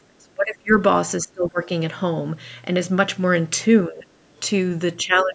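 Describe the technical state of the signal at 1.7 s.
Right around 1.7 s you're at the tail of a rough patch that runs from 1.23 to 1.68 s. The speech gets turned down hard there, sinking by something like 25 dB at its deepest, with roughly 0.4 s of it pulled down in total. That's speech suppressed in double talk, most likely because both ends were talking at once and the echo canceller, unable to separate the local talker from the loudspeaker echo, ducked everything.

In the last few hundredths of that stretch, from 1.63 to 1.68 s, there's also a faint scrap of the other side's voice leaking through, sitting somewhere near 25 dB below the speech. That's likely far-end audio from the loudspeaker that the echo canceller didn't fully strip out of the mic signal, so a second voice slips in just as the suppression lets go. The band limit near 8 kHz from the call's mic processing is expected.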